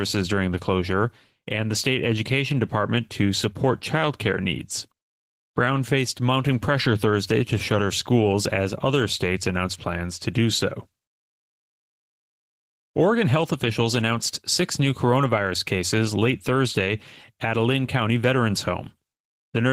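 Opus voice compression affects the whole speech clip. It sounds hoarse and slightly robotic, which fits hybrid coding near 16 kbps with coarsely coded excitation.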